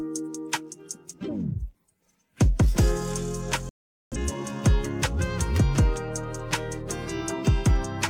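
A digital broadcast dropout cuts the audio from 3.69 s to 4.17 s, leaving a hole of about 0.43 s before the programme resumes mid-flow. The receiver stopped getting decodable frames, either because the signal was lost or because frames failed their error check, so it muted output until valid data returned. A gap of this length fits a run of about ten lost frames. The audio sent during that interval cannot be recovered.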